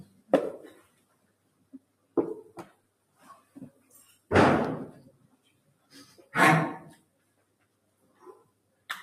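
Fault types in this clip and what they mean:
noise suppressor applied to music or sounds: a speech-tuned suppressor treats sustained material and ambience as noise, pulling levels down by roughly 20 dB at times, so the audio pumps and thins.
sound cut by the noise suppressor: at 0.05, 0.76 to 2.16, 2.71 to 3.92, 4.09, 5.1 to 6.33 and 6.96 to 8.89 s, held sound sinks by up to about 13 dB, cutting tails short.
electrical switching spike: at 4.65 s a sharp snap or tight cluster of clicks sits on top of the sound, likely a nearby switch or static discharge arcing into the line.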